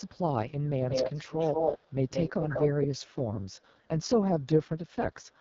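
The clip is speech, carried over an AMR wideband (HD Voice) codec under heavy strain. It sounds rough and raspy throughout. Nothing is present above 7.4 kHz. The top band is thin, hissy filler, not real detail. This damage fits the lowest AMR-WB rate, near 6.6 kbit/s. From 0.89 to 3.15 s there is an echo leak. A copy of the speech trails about 183 ms behind. It is roughly as loud as the original. The likely cause is a loudspeaker on one side of the call whose echo canceller failed to remove its own playback.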